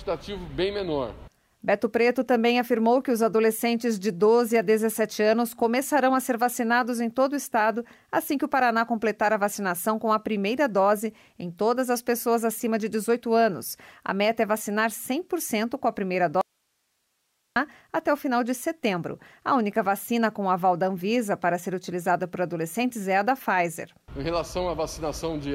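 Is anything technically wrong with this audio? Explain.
Yes. From 16.41 to 17.56 s the sound cuts out abruptly, leaving faint hiss around 50 dB down for about 1.15 s. This is an audio dropout to a faint residue. The signal was likely lost upstream while the path after the break stayed live, passing only its noise floor.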